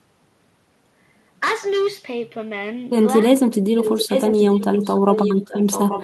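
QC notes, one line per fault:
3.8 to 6.04 s, echo leak: a second copy of the speech trails the original by about 0.84 s, only a few dB quieter, until the clip ends. Likely a loudspeaker on the far side whose echo canceller let its microphone pickup return.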